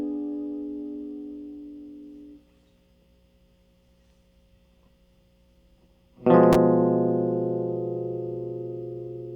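No technical faults occur anywhere in this music, so there is nothing to place in time order.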